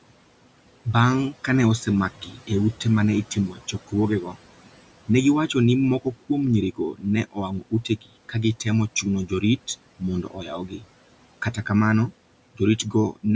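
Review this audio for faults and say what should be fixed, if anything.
Noise suppressor artifacts run through the whole clip. The suppressor pulls steady room noise down by about 18 dB, frame by frame. The background sinks in pauses and swells back under the speech. A gentler suppression setting would prevent this.

Speech cut by the noise suppressor happens six times. The suppressor mistakes soft speech for noise and turns it down with the background. Parts of words sound swallowed or faint. The first cut is at 1.86 to 2.5 s, after "' kane" and before "e ute ma ne". It dips about 13 dB for roughly a fifth of a second. The next cuts are at 3.35 to 4.39 s, just after "e ute ma ne", at about 17 dB; 6.75 to 8.66 s, the deepest at about 18 dB and about half a second in total; 9.02 to 9.68 s, about 12 dB; 9.99 to 10.84 s, about 13 dB; and 12.55 to 13.24 s, about 15 dB. Room noise sits about 18 dB below the speech, so a lower suppression depth or a longer hold time would keep these quiet sounds intact.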